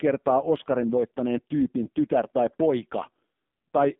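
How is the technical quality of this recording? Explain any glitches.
Technical quality is poor: the whole recording has passed through the AMR narrowband mobile codec, and the damage is heavy. Throughout the speech, the sound is confined to a telephone band of roughly 200 Hz to 3.6 kHz, so it sounds thin and muffled. AMR-NB rebuilds the voice from a compact vocal-tract model excited by a few pulses per 5 ms subframe. At the coarse setting heard here, which points to the low 5.9 kbps mode, that reconstruction leaves the voice buzzy and synthetic.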